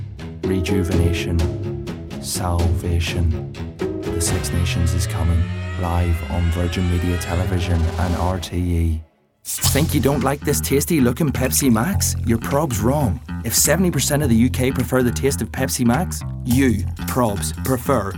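No dropouts, clicks, distortion or level problems occur anywhere in the recording.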